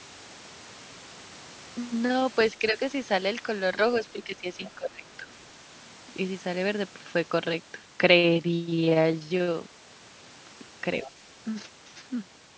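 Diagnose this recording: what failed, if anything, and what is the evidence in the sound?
Speech dips slightly at 2.59–2.79 s, then sinks by about 15 dB from 4.12 to 5.33 s. This is likely speech suppressed in double talk by the call's echo canceller.

A faint second voice flickers at 11.0–11.08 s, about 20 dB below the talker. This is the other side's voice leaking through, likely loudspeaker echo the call processing failed to cancel.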